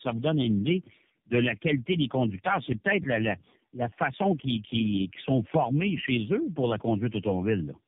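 From start to finish the speech sounds rough, muffled and warbly, with nothing above about 3.7 kHz. That layered smearing is tandem speech coding: the call was decoded and re-encoded at each network border, so every low-rate coder worked on the previous one's damaged output and the errors piled up. The depth of damage fits about three speech codecs in a row, such as G.729A followed by two AMR-NB stages, joined by G.711 links.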